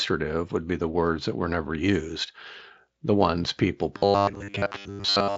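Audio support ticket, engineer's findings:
Robotic sound from repeated short buffers, 3.97–5.37 s, right after "the ones people": rigid metallic 100 Hz buzz running to clip end. Likely a buffer underrun, with the last 10 ms replayed through most of the stretch and fresh audio skipped.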